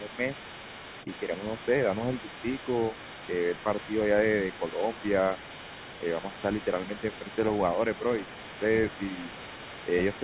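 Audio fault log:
0.0–0.2 s, 1.2–2.93 s, 4.6–4.86 s and 6.21–6.29 s, speech suppressed in double talk: the talker's speech dips by about 5 dB in short stretches, a fraction of a second each, the longest scattered through the 1.2–2.93 s span. This is likely an echo canceller turning down the microphone while both sides talked at once. On a waveform the envelope sags briefly. On a spectrogram those moments show fainter energy, within a band which stops at 4 kHz as expected for a G.711 mu-law call.
Throughout, other side's voice leaking through: a second, fainter voice sits under the talker for the whole clip, about 15 dB down. This is likely loudspeaker playback that the echo canceller did not fully remove from the microphone. On a spectrogram it appears as a weaker, separate set of harmonic traces in the gaps and beneath the main speech.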